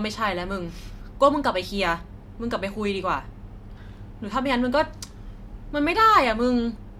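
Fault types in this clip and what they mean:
No technical faults can be heard anywhere in this recording.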